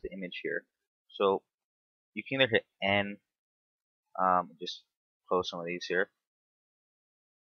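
Nothing technically wrong can be heard anywhere in the audio, so there are no faults to report.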